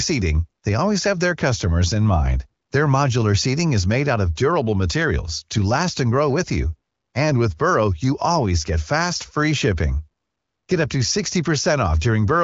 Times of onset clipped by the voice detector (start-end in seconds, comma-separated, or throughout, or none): none